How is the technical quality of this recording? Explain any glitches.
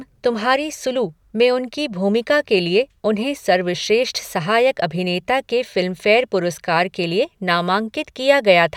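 Nothing here sounds off; I can't hear any glitches or technical problems anywhere in the recording.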